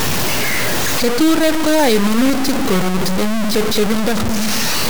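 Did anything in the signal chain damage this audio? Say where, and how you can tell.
Yes. Low bit depth without dither runs through the whole speech clip, from start to end. The distortion is grainy and tracks the voice rather than sitting as a steady hiss, with the error only a little quieter than the speech itself. Quiet syllables and decays turn gritty or sputter and drop out. The likely stage is a sample-format conversion that truncated the signal to about 3 bits with no dither, so each sample snaps down to one of very few steps.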